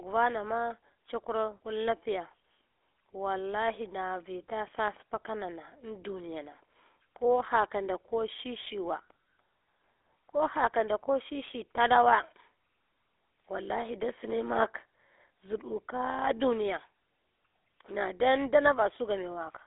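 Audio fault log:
Throughout, GSM full-rate codec: the speech sits in a 300 Hz to 3.5 kHz telephone band with nothing above 3.7 kHz. It has a plainly audible buzzy, gravelly roughness because a vocal-tract model driven by sparse, regularly spaced pulses replaces the real waveform, which fits a 13 kbps coder.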